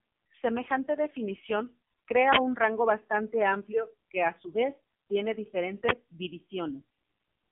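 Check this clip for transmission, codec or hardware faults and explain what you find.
One fault runs through the whole clip. The speech sounds buzzy, boxed-in and synthetic, with nothing above 3.7 kHz and a band of roughly 200 Hz to 3.5 kHz. That is the AMR narrowband mobile codec, heavily damaged, which fits its low 5.9 kbps mode, where too few pulses drive the vocal-tract model.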